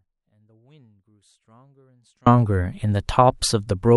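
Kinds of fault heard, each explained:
Audio dropout to a faint residue: until 2.26 s only faint sound about 40 dB down remains, likely signal lost on a live path; near-flat waveform, faint spectrogram, then abrupt return.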